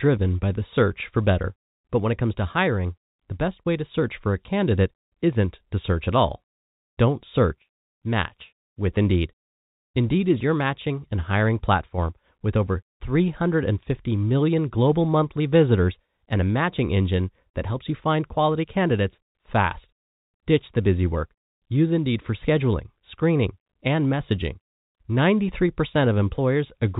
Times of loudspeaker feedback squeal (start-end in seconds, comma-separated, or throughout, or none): none